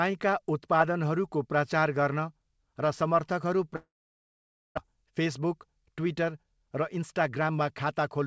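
From 3.76 to 4.79 s the sound fades into a brief buzz, then about 0.87 s of near silence, likely a long network dropout; unlike a short packet loss, about 0.6 s never returns. From 4.88 s to the end, a jitter buffer speed-up plays roughly 9% fast, trimming about a third of a second. Pitch stays unchanged, unlike simple resampling.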